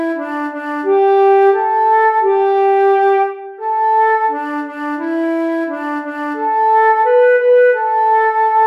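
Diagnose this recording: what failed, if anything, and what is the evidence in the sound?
Nothing in the signal chain points to a failure at any stage, from the analogue input through conversion, buffering and any processing to playback.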